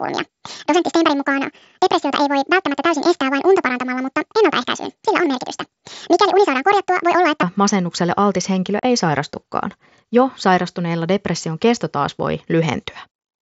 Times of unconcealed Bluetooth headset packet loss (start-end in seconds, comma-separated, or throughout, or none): 8.79-8.83